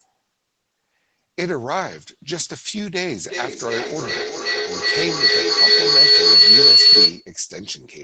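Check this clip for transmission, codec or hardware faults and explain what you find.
There is one fault, a feedback howl from 3.25 s to 7.33 s. Two devices in the same room on this call formed an acoustic loop, with each microphone picking up the other's loudspeaker. The loop gained level on every pass, so the repeats grew and narrowed to a whistle near 4 kHz, with the loop's delay roughly 0.4 s. At its peak the howl is about 14 dB above the speech. On a spectrogram it appears as a bright horizontal line near 4 kHz. The waveform swells well beyond the speech envelope.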